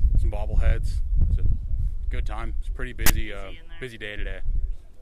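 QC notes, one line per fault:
3.06–3.10 s: file tags played as audio. Text metadata decoded as samples, giving a 33 ms hard-edged rasp with a one-sided offset.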